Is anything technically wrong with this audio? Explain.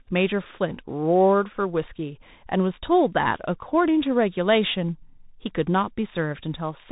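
Yes. The speech runs through a Bluetooth CVSD headset codec for the whole clip, and the damage is plainly audible. CVSD codes each sample as a single up-or-down bit with an adapting step, which fits a 64 kbps stream. Loud, fast-changing sounds outrun the step and distort, s sounds come out scratchy, and a granular hiss sits underneath. Nothing above 3.8 kHz survives. A spectrogram shows a hard ceiling at that frequency.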